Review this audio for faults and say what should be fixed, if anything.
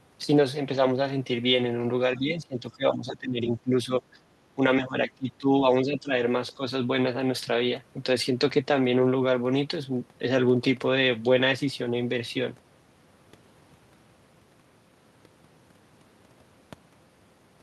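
Speech suppressed in double talk shows up as level dips of roughly 10 to 20 dB at 2.16–4.02, 4.19–4.23, 4.55–4.61, 4.85–5.49, 5.84–6.12 and 6.55–6.62 s, deepest around 4.85 s. The likely cause is an echo canceller that cannot separate the local talker from loudspeaker echo while the far side speaks, so it ducks both. Tuning the canceller's double-talk detection and reducing its suppression aggressiveness would prevent it.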